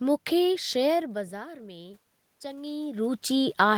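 Automatic gain rising affects this speech: the input drops about 17 dB, so from 0.98 to 3.08 s the gain creeps up about 4 dB, swelling voice and room noise together.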